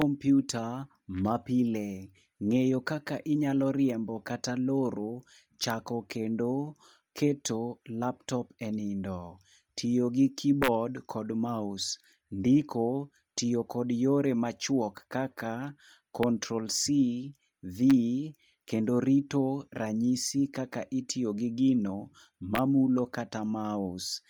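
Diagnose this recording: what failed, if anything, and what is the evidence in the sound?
The speech carries a heavy breathy, grainy edge throughout, with noise-filled upper bands that still extend to about 20.1 kHz. This is likely Bluetooth LC3 compression at a low bitrate, near 32 kbps, in the codec stage. A spectrogram would show smeared, speckled high-frequency texture in 10 ms blocks.

Integer overflow occurs in a gain or sample-format stage at 0.02, 5.64–5.70 (between "inyalo riembo kata loro" and "kendo keto laptop e"), 10.63–10.68, 16.23, 17.90 and 22.55–22.59 (after "kaka itiyo gi gino"). Peaks barely over full scale, by up to about 1 dB, wrap to the opposite sign. Each one is a violent crack, seen as full-range vertical jumps in the waveform.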